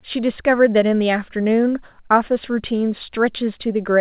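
No technical faults can be heard in this speech.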